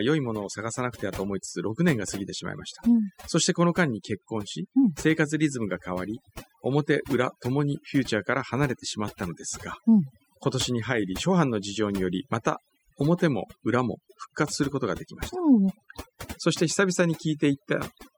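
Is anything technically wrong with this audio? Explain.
Yes. Throughout the speech there is overdone noise removal. The pauses between phrases drop to near silence, with twinkling specks where background noise used to be. A noise reduction stage was pushed too hard: it cuts individual frequency bands deeply whenever their level sits close to its noise estimate, so isolated bits of residual noise flicker through while the quieter parts of the voice are stripped away.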